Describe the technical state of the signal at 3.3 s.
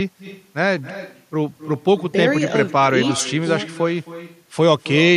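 At 3.3 s the signal carries echo with no canceller, as it does for the whole clip. The far end is playing the call through a loudspeaker, its microphone is picking that up again, and nothing is subtracting it before it returns. So the speech at this point is trailed, roughly a third of a second later, by a fainter copy about 17 dB down, thinner than the direct sound.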